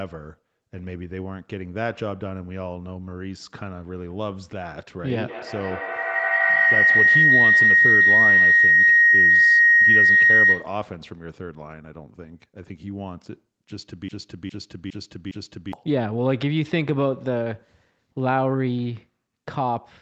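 From 5.28 to 10.9 s a feedback howl builds: the loop between a microphone and a loudspeaker in the same room gains on each pass, so the sound swells to a tone near 2 kHz, peaking about 9 dB above the speech and pulsing roughly every 150 ms. Unlike an echo, it grows rather than fading away.

Between 14.09 and 15.73 s a broken-record loop appears. The same 409 ms fragment plays back to back, four times, with no change in level, and the speech that should have filled that time is missing. That points to a player or stream that likely stalled and resent its last buffer. An echo would decay and overlap the new audio instead.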